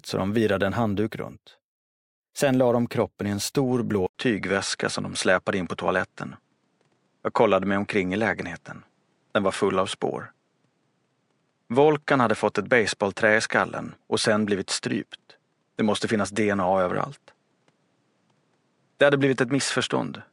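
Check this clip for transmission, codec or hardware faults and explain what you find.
One fault is present. At 4.07 s, right after "kroppen i en stor", an 80 ms silence is followed by duller speech at the same loudness over faint new background noise, likely an input switched to a poorer device. From there to the end, nothing passes above 10.7 kHz. A spectrogram shows a hard ceiling, and the waveform shows a brief flat gap.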